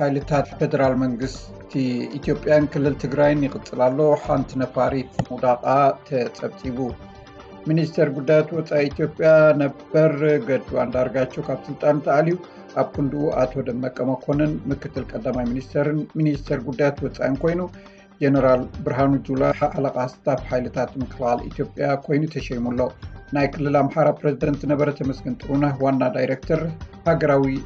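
At 0.44 to 0.60 s, 19.51 to 19.73 s and 24.42 to 24.48 s, frames out of order swap two adjacent blocks of about 78, 105 and 26 ms. Each stretch plays back garbled and fluttery. Unlike a dropout or a repeat, nothing is lost or doubled.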